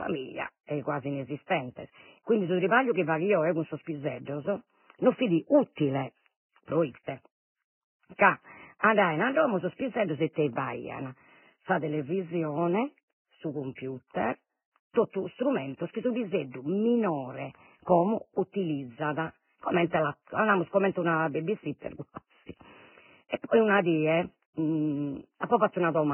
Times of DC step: none

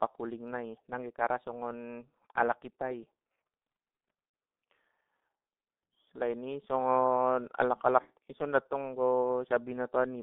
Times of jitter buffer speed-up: none

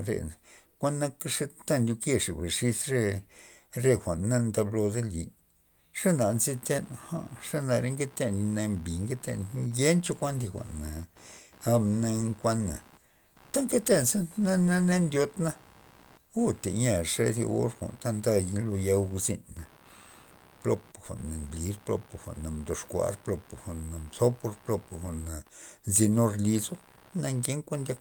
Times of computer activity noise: 6.04-28.01

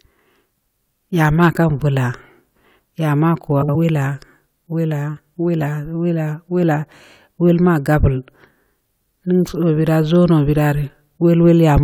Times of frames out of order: 3.62-3.76

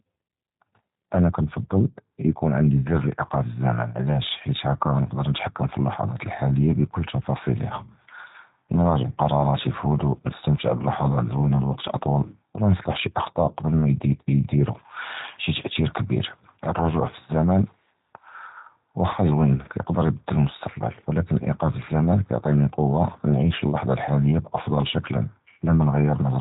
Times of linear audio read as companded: none

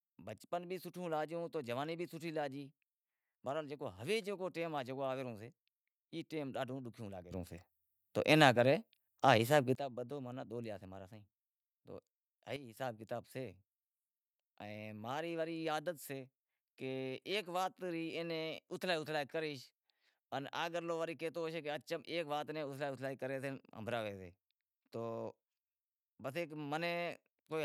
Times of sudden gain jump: 7.31-9.75, 12.56-12.77

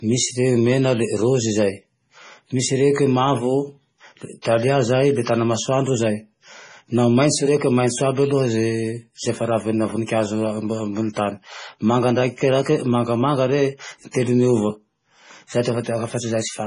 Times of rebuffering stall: none

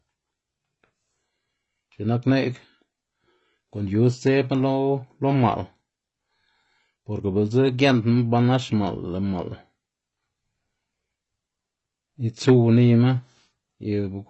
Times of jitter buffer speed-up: none

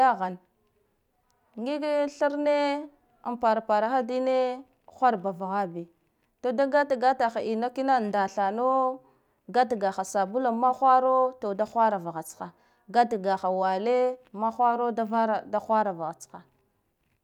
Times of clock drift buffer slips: none

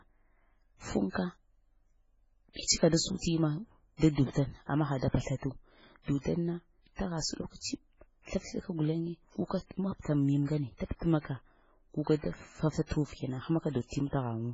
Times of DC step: none

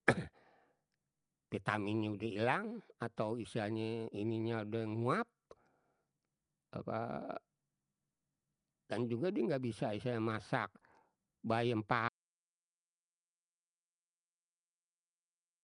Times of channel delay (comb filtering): none

